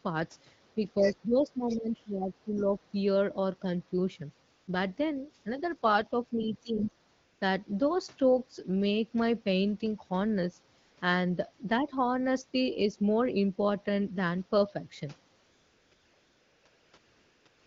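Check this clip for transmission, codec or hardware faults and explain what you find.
Three faults are present: speech suppressed in double talk, the other side's voice leaking through, and AMR comfort noise filling pauses.

Speech suppressed in double talk, 0.75–2.95 s, 5.44–5.62 s and 6.3–6.94 s: the talker's level dips and parts drop out, about 15 dB at its deepest in the first and third spans and about 10 dB in the second. The first span loses roughly 1.5 s of level in pieces. The likely cause is an echo canceller that, with both ends talking at once, could not tell near speech from loudspeaker echo and attenuated both.

Other side's voice leaking through, 0.99–1.13 s, 1.68–1.78 s, 2.55–2.64 s and 6.77–6.82 s: brief, faint scraps of a second voice sit under the talker. They are about 15 dB below the speech in the first two, about 25 dB in the third, and about 20 dB in the last. This is likely echo residue: the far party's audio, played on the talker's loudspeaker, was picked up by the microphone and not fully cancelled.

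AMR comfort noise, 4.55–4.67 s, 7.13–7.41 s, 10.81–10.97 s, 15.39–15.91 s, 15.93–16.65 s, 16.67–16.93 s, 16.97–17.45 s and 17.47–17.66 s: the background becomes a smooth, steady hiss that switches in and out, packed almost continuously into the final two seconds. During these pauses the sending phone stopped transmitting speech frames, and the receiver synthesised noise from a coarse level and spectrum description. The AMR wideband (HD Voice) coding of the speech itself sounds clear, which fits a rate around 12.65 kbit/s.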